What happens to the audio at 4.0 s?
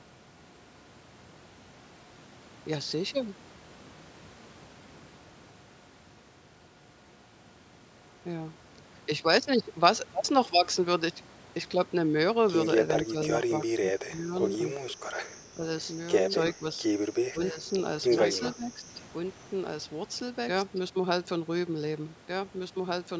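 Nothing goes wrong at 4.0 s: the speech carries on intact, with only the call microphone processing's normal trimming of the lowest bass and a band that stops at 8 kHz.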